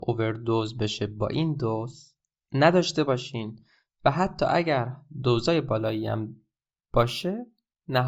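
From 5.79 s to 8.07 s, imaging from linear upsampling: straight-line interpolation from 16 kHz to 44.1 kHz leaves a faint mirrored 8–16 kHz spectrogram band, about 35 dB down, giving sibilants a metallic shimmer.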